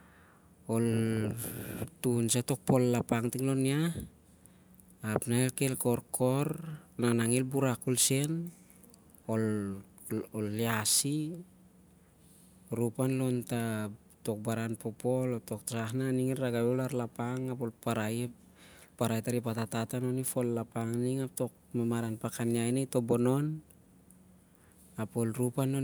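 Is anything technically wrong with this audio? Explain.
No, the speech signal shows no technical faults anywhere in the recording.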